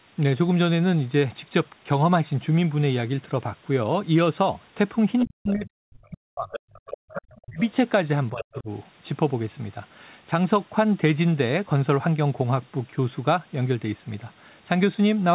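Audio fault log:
5.19–5.24 s, 6.51–6.97 s, 7.37–7.41 s, 8.37–8.55 s: other side's voice leaking through. Faint second-talker scraps sit about 15 to 35 dB under the main speech, likely loudspeaker echo the canceller missed. On a spectrogram they show as weak, separate harmonic traces inside the 4 kHz call band.
5.24–6.51 s, 6.97–7.59 s, 8.32–8.70 s: speech suppressed in double talk. The talker's level drops by as much as about 40 dB over roughly a second, half a second and a third of a second. This is likely the canceller ducking both talkers at once, and it appears on the waveform as sudden gaps in the envelope.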